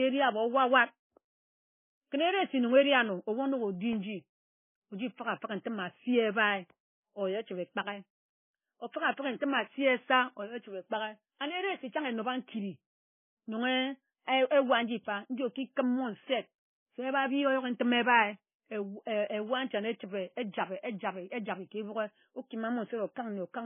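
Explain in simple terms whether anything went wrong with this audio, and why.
Two things went wrong with this speech recording.

The whole clip sounds dull and smeared. Nothing can be heard above about 3.5 kHz, so the crisp edges of consonants are missing. This is most likely low-bitrate audio saved at a high bitrate. The sound was first squeezed hard into a small MP3, which threw detail away. It was then saved again as a larger MP3. The bigger file cannot bring back what the first squeeze removed.

There are also two very short gaps, at 3.93 s and 12.01 s. Each is a block of digital silence. For well under a thousandth of a second, the sound drops out and jumps straight back. A gap this short fits the program missing a small buffer. That means it did not deliver the next bit of sound in time.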